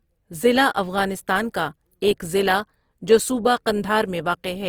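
Throughout, the speech turns grainy and rough, likely Opus compression at a low rate near 24 kbps; a spectrogram shows noise-filled bands reaching 20.4 kHz.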